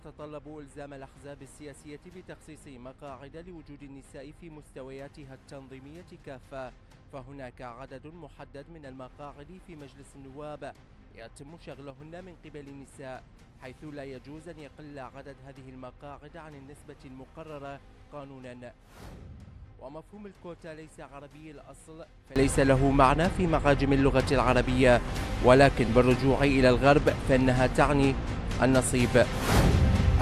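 At 11.90 s the level drops abruptly by about 6 dB, holding for roughly a tenth of a second before snapping back at 12.0 s. At 22.36 s it jumps up by about 24 dB and stays there to the end. Both are sudden gain jumps: the sound and the background noise shift together, with no fade, as a gain change or bit shift likely applied without a ramp would produce.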